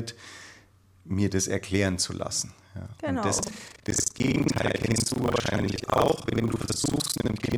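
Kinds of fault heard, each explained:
Buffer tearing: the writing side and the reading side of the output ring buffer have drifted out of step, so each period is assembled from two sources. From 3.36 s to the end, roughly half of every buffer plays audio from an earlier lap, around 70 ms stale, spliced in with abrupt joins. The speech takes on a rough, robotic rattle at 25 Hz, one tear per 40 ms period, which tracks the signal and disappears in the pauses.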